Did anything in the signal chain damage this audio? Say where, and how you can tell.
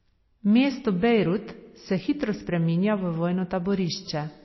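Yes, codec stage: throughout, the speech stops dead at 5.8 kHz and swirls watery, likely starved MP3 compression; spectrograms show a hard ceiling with flickering holes.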